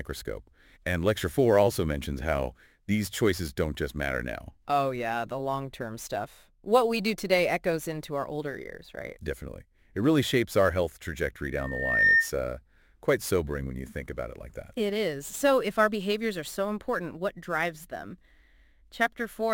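A microphone picked up the loudspeaker it was feeding, and the loop's gain rose above one at 1.8 kHz. From 11.51 to 12.31 s a loudspeaker feedback squeal swells over about half a second into a single tone roughly 10 dB above the sound.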